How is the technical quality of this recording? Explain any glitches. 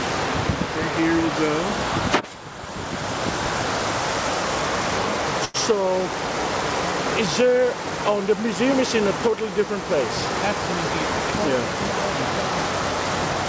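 The recording has one glitch, a short stall from a late packet, at 5.45 to 5.57 s. A packet failed to arrive on time, so the jitter buffer ran dry. The receiver filled the gap by stretching the last sound for about 93 ms, then resumed exactly where it left off once the packet came in. Nothing is lost, but a sound hangs on unnaturally, with a faint buzzy or dipped quality, and everything afterwards runs about 93 ms late. The audio also carries nothing above 8 kHz, which fits a wideband call codec such as G.722 at around 64 kbps.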